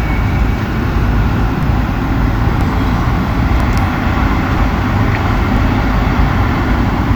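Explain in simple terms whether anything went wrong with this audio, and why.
Something went wrong where the stream's pieces were joined. The audio arrives in one-second segments, and their time stamps overlapped, a fault called overlap between stream segments. The player trimmed the supposedly doubled part, but that sound existed only once, so about 6 to 18 milliseconds were lost at each join and the waveform jumps. You hear a tiny click or skip about once a second, at 1.63, 2.61, 3.60, 4.58, 5.57 and 6.55 seconds.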